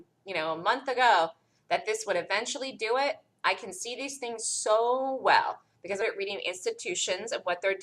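At 6.01 to 6.04 s the sound lurches forward with a brief blip, resuming abruptly rather than fading. This is likely a stream segment skipped, where one chunk failed to load and playback jumped ahead; unlike a dropout, no silent gap is left behind.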